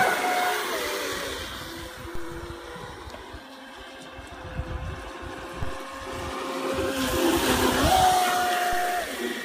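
A DC step occurs at 2.15 s, 5.63 s and 8.73 s, each heard as a low thump or click while the audio itself carries on unchanged. At each point the waveform's zero line suddenly jumps by about -24 dBFS (about -25 dBFS at 8.73 s), as when a converter recalibrates or an offset input is switched in. The offset then drains away through a roughly 2 Hz high-pass, producing the brief low-frequency bump.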